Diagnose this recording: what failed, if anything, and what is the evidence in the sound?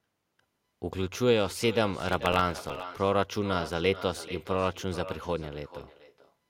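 Every phrase is followed by a fainter, thinner copy of itself, arriving roughly 0.4 s later and sitting about 14 dB below the direct speech, for the whole recording. This is echo with no canceller, introduced at the call-processing stage. The far end played the call through a loudspeaker, its microphone picked that playback up, and nothing subtracted it. The talker's own speech therefore returned after a full network round trip.

From 2.0 to 2.83 s a gritty, tearing crackle rides on top of the speech and then stops abruptly. This is processor overload crackle in the driver or buffer stage. The processor fell behind and missed a few dozen buffer deadlines over that stretch. Each miss replayed a scrap of stale audio with hard edges. The very fine grain of the texture fits buffers of about 0.7 ms, and the crackle clears once the load eases.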